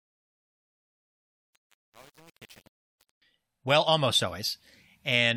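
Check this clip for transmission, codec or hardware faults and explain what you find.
One fault is present: truncation distortion on the fade-in, from 0.0 to 3.22 s, ending just before "well almost". The gain stage that applies the fade discards low-order bits without dither. The coarseness suggests something like a 7-bit word length. While the fade's gain curve rises smoothly, the quiet speech at its start is forced onto a few square steps. It sounds gritty, and clears only as the level reaches full volume.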